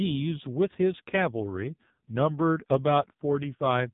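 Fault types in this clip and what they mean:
AMR narrowband mobile codec: throughout the speech, nothing above about 3.8 kHz survives, so sibilants and breath lose their edge and the sound has the boxed-in quality of an old mobile call. Coding here is heavy, consistent with a low rate near 5.9 kbps. The codec rebuilds the voice from a vocal-tract model excited by only a few pulses per short subframe, and at this rate the result is buzzy and synthetic, with a metallic, robotic texture.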